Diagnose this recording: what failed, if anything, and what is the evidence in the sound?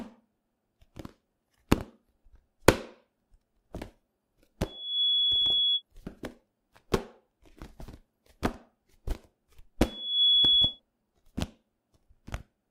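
Loudspeaker feedback squeal in the acoustic mic-to-speaker loop: a 3.4 kHz tone swells in under half a second at 4.65–5.82 s and louder at 9.80–10.80 s, where loop gain exceeds one.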